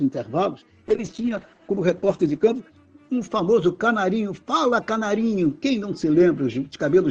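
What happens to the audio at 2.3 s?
At 2.3 s the audio is inside a call bitrate drop that runs from 0.89 to 2.69 s. The call's bandwidth estimate fell, so the Opus encoder was pushed from 32 kbps down to about 9 kbps, holding the lowest rate for 1.73 s. It codes more coarsely and narrows the band from 12 kHz to 8 kHz, giving a rough, watery, muffled sound. Unlike packet loss, there are no gaps or glitches, and the clarity recovers before the clip ends.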